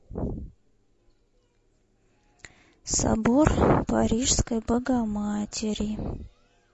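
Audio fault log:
throughout, low-delay AAC compression: the speech was likely squeezed through a low-delay AAC encoder such as AAC-ELD, and the damage is plainly audible, which fits a bitrate around 32 kbps. At so low a bitrate the bits run thin across its short frames. The voice comes out rough and grainy, with noise filling the gaps between harmonics and an upper band that sounds dulled or artificial.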